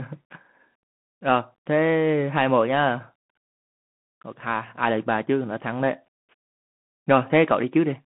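Throughout, the speech carries a Bluetooth CVSD headset codec: a one-bit slope encoder at 64 kbps, band-limited to 150 Hz to 3.4 kHz, leaving nothing above 3.8 kHz, with gritty sibilants and granular hiss.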